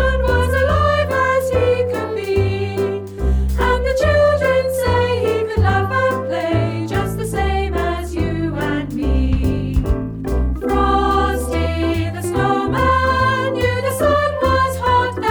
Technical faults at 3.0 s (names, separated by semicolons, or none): none